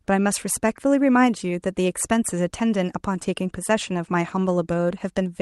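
No faults are audible in the speech; the call path's coding rolls off the top end near 12 kHz, which points to Opus at around 40 kbps.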